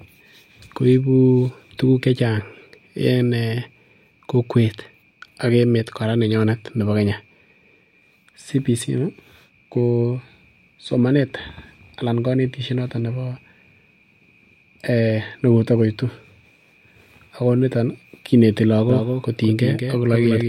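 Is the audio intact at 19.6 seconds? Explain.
No. From 18.9 s, just after "niton kineti", to the end, a doubled audio track appears: a dry, full-band copy trails about a fifth of a second behind, a few dB quieter, likely from a second, slower capture path. On a spectrogram, every onset repeats as a fainter shifted copy. The waveform shows the same echo, with no decay and no room colour.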